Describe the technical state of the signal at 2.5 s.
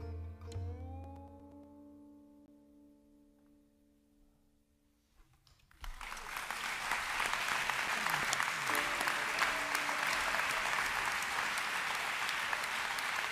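A block of digital silence runs from 2.46 to 2.48 s, a 20 ms hole where the sound cuts out, which points to the output buffer not being filled in time. The abrupt cut and return are heard as a brief pop-like dropout.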